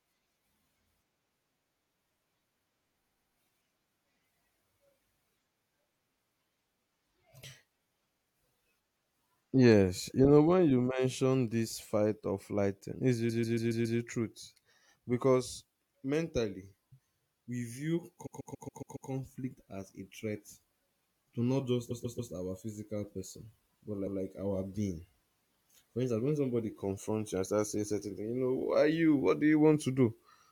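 This speech clip has repeated frames. The same 0.14 s block of audio replays, which fits a run of six compressed frames sent again. It happens at 3.07 s and 21.9 s, after "or flight thing it's" at 13.28 s, after "we view" at 18.25 s, and at 24.06 s before "our being". The result is a stutter.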